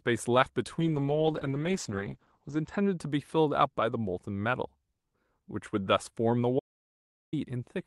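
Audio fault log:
0.81 to 3.05 s, call bitrate drop: The speech turns rough and watery, then recovers. The call's bandwidth estimate fell, so the Opus encoder was forced to spend far fewer bits. Coarser coding smears the detail. The top end also narrows, from about 12 kHz to 8 kHz, which dulls the sibilants. The worst stretch lasts 1.75 s. The degradation fits a fall from about 40 to 9 kbps.
6.59 to 7.33 s, audio dropout to silence: The speech cuts out abruptly and returns mid-flow after 0.73 s. The gap is silent, with no room tone or background left underneath. That points to the input itself vanishing while the recording carried on writing silence, likely a briefly disconnected device or failed link. Whatever was spoken in that gap is lost.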